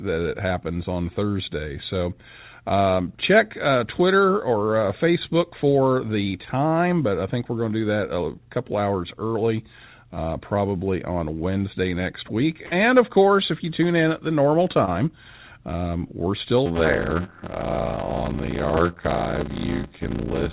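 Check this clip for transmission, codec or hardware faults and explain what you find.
Three faults are audible: a burst of packet loss around 12.7 s, a short concealed packet loss near 14.9 s, and a padded block size mismatch from 16.65 s to the end. The band-limited G.711 call path, with nothing above 4 kHz, is not one of the faults.

Burst of packet loss, 12.66 to 12.73 s. About 60 ms of audio never arrived in time. The receiver extended the last sound for about 53 ms while fading it down, then jumped ahead, so the stretch in between is gone. You hear a brief held, dimming tail followed by an abrupt resumption. On a spectrogram the harmonics or noise freeze into flat horizontal bands that fade before the signal picks up again. In the waveform a repeating, decaying pattern runs into a discontinuity.

Short concealed packet loss, 14.85 to 14.89 s. Roughly 20 ms was lost, and the decoder covered about 18 ms of it by continuing the preceding sound, pitched or noise-like as appropriate, then cross-fading back into the real signal. 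It comes across as a momentary smear or tiny wobble, and a short consonant may drop out. The spectrogram shows a small smoothed or slightly blurred patch. In the waveform the cycles briefly lose their fine detail.

Block size mismatch (padded), 16.65 s to the end. The reading stage takes 512-sample blocks, while the writing stage supplies shorter ones, which fits writes of about 320 samples. The shortfall in every block is filled with zeros. Those regular gaps produce a buzz at about 86 Hz, and the audio plays at 0.625 times normal speed with its pitch roughly unchanged. A spectrogram shows evenly spaced vertical gaps or striations, and the waveform shows near-silent runs repeating every block.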